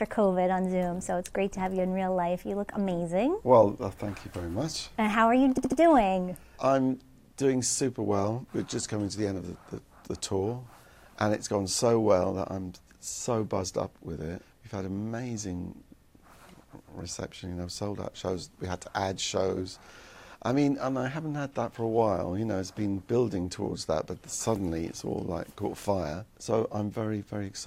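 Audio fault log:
5.57 to 5.79 s, repeated frames. A 72 ms block of sound plays three extra times in a row, heard as a brief stutter. The same stretch of compressed data was decoded again, which fits a short run of duplicated frames. This adds 216 ms.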